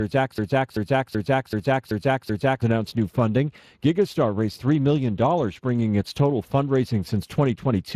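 From the very start until 2.62 s, a fragment of about 0.38 s repeats back to back six times, already under way as the clip opens, before normal playback resumes at "announced new funding". This broken-record loop likely comes from a player, encoder or stream stalling and resending its last buffered piece, so the audio meant for that stretch is lost.

Throughout, the speech sounds plainly hoarse and grainy, with nothing above 15.3 kHz. That is Speex codec damage: the CELP coder has too few bits for the excitation signal, which fits a setting of roughly 22 kbps.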